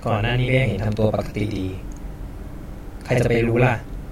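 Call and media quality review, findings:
Channel delay (doubling), whole clip. Speech heard twice, second copy about 46 ms late at equal level, like a single slap echo. Probable component: one channel's capture or playback buffer; the lag fits a 2048-sample buffer, and both channels are summed to mono. Unlike room reverb: one discrete repeat, no decaying tail. Unlike comb filtering: the gap is too long to read as tonal colouring.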